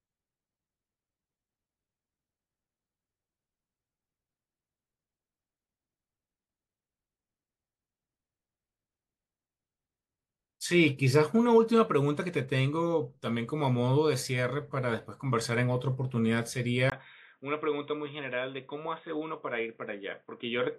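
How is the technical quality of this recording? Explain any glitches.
Quality drops audibly near the end. From 16.90 s to the end, after a brief 20 ms silence, the speech turns dull and boxy, with nothing above 3.8 kHz, about 5 dB quieter, and a new noise floor. The likely cause is the input switched to a poorer device, a narrowband microphone or headset.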